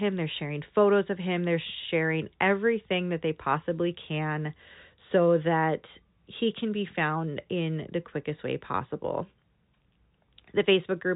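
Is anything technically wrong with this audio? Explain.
No, nothing is technically wrong with this audio; the speech comes through the G.711 telephone coding as expected, with its usual cut-off around 3.8 kHz.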